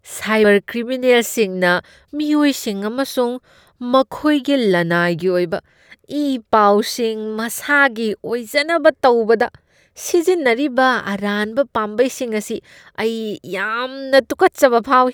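A speech recording with compressed frames skipped at 0.44 s: about a tenth of a second just vanishes where the decoder jumps ahead.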